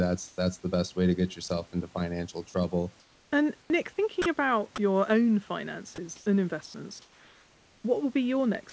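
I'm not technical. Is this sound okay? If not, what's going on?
No, not quite. There are two related faults.

The first is comfort noise in place of the background. At 0.28 to 0.38 s, 3.00 to 3.70 s (right after "into financial trouble"), and 6.16 to 7.84 s, the natural room sound disappears. A smooth, featureless hiss replaces it. The first time, its level is also a touch different. The likely cause is the calling system pausing transmission when nobody talks, with your device filling the gap with artificial noise.

The second is sound dropped by the voice detector. The system likely mistook quiet moments of speech for silence and stopped sending them. Tiny slices of sound vanish and steady hiss takes their place. This happens at 1.48 to 1.50 s, between "best way to get" and "into financial trouble". It happens again at 4.22 to 4.26 s, just before "about your own", and at the very end, from 8.70 to 8.72 s.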